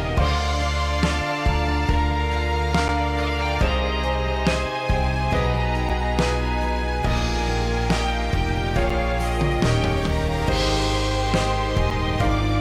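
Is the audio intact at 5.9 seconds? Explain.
No. At 5.89 s there is a gap between chunks: silence is left at the join between blocks of audio, which fits delivery in 3-second chunks, leaving about 7 ms of silence. Nothing is lost, but the sound breaks off in a short hole.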